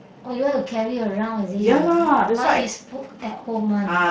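No technical faults can be heard in the speech.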